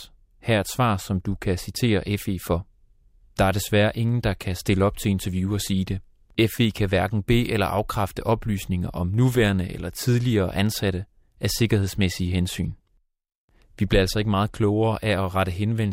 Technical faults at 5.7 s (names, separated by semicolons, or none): resampler restarted on every block